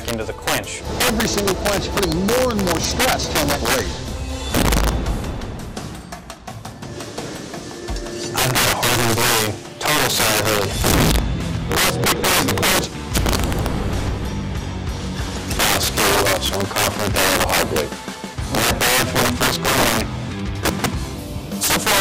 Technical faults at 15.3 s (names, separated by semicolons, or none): integer overflow